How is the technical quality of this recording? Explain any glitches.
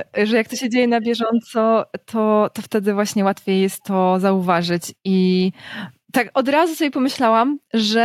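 Nothing in the recording stands out as a glitch, so there's really nothing here to explain.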